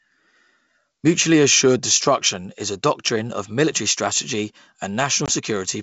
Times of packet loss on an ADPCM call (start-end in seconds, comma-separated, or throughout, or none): 5.26-5.31